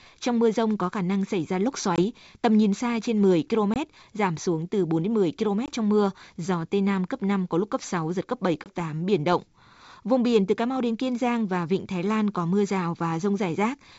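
Packet loss on an ADPCM call cuts hard-edged 20 ms holes at 1.96, 3.74, 5.66 and 8.64 s. Each time, about one packet's worth of sound drops out. The decoder's predictor then loses sync, so the sound returns slightly distorted before settling.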